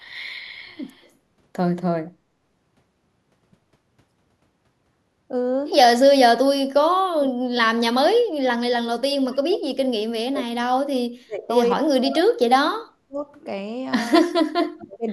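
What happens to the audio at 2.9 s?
Nothing goes wrong at 2.9 s: the speech there plays through cleanly, with no dropout, click, distortion or other audible fault.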